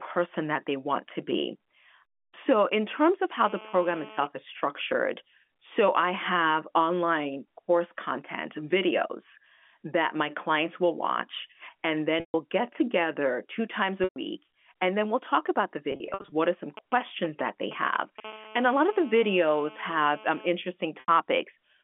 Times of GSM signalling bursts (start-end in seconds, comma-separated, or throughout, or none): 16.77-18.20